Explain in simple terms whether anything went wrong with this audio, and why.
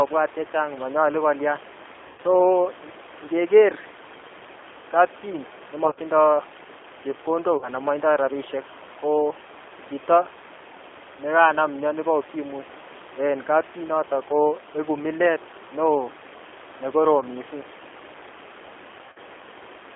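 The G.729 codec affects the whole clip. It squeezes the speech into a narrow phone-line band from 300 Hz to 3.5 kHz and rebuilds it from a simple model of a voice. That makes it sound thin, slightly rough and a little robotic throughout.

VoIP packet loss concealed by the speech codec occurs at 2.07–2.20 s, 5.85–5.99 s, 7.57–7.69 s, 17.21–17.24 s and 19.06–19.18 s. Small pieces of the call went missing, and the decoder filled each gap by stretching the last sound it had. This gives brief buzzy, smeared moments that fade out.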